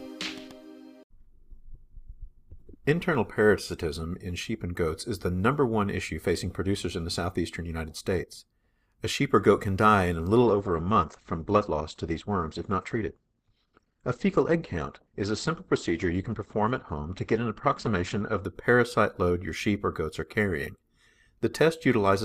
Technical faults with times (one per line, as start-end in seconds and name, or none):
10.44-18.44 adaptive stream at a lower bitrate